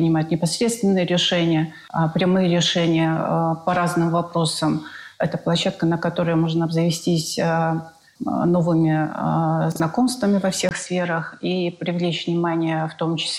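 At 9.72 to 9.80 s the chunks arrived out of order: one 40 ms block of audio was delivered a chunk late and played after the block that should follow it. Nothing is missing, but the sound jumbles briefly.

From 10.69 s to the end, a drop-out of about 20 ms marks what is likely an input switch to a poorer device. After it, nothing reaches above 10.5 kHz, so the sound turns duller, with a faint new noise floor roughly 45 dB down and the level essentially unchanged.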